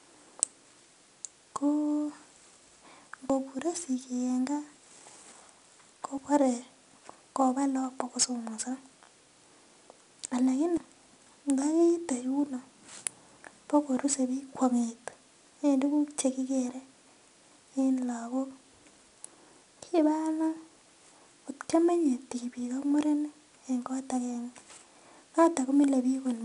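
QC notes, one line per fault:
Throughout, 4-bit ADPCM compression: a gritty hiss rides on the speech and rises and falls with its loudness, with roughness on sharp consonant attacks. Each sample is coded as a coarse 4-bit step from a predicted value, so the error grows with the signal and lags on sudden onsets where the step size cannot adapt fast enough. Nothing is present above 10.6 kHz, which fits a reduced sample rate of about 22 kHz and takes some air off the top. The damage is plainly audible.
3.30 s, 6.18 s and 10.77 s, dropped buffer (overrun): each is a jump with the speech skipping forward, with no gap of silence. About 50 ms is missing at 3.30 s and 6.18 s, and about 150 ms at 10.77 s. The likely cause is the recording side failing to collect its samples before they were overwritten, so the audio on either side of the loss is butted together.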